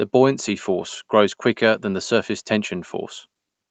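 No technical faults are audible in this speech.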